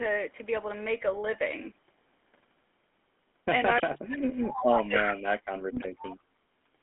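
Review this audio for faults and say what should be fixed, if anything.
The whole clip shows the gravelly, buzzy roughness of the GSM full-rate codec, with the band held to 200 Hz to 3.5 kHz, which fits a 13 kbps coder. A band-limited but clean line would lack this grain. Prevent it by routing the call over a wideband codec end to end.

An echo leak likely returns the far talker's own speech about 310 ms late, at 3.77 to 4.01 s at about 15 dB below the speech, at 4.54 to 4.63 s at about 5 dB below, and at 4.81 to 5.15 s at about the same level. It is a single repeated voice, not a second talker. Prevent it by tuning the loudspeaker side's echo canceller or having that side use a headset.

From 3.81 to 6.35 s the speech dips and cuts out for roughly 2 s in total, falling as far as about 40 dB. The likely cause is speech suppressed in double talk by that echo canceller. Prevent it with an echo canceller that handles double talk without heavy suppression.

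GSM bit errors at 5.75 to 5.91 s make the speech squawk and gargle over several consecutive frames. That points to a weak radio link, not a clean dropout. Prevent them by improving signal strength or moving the call off the weak cell.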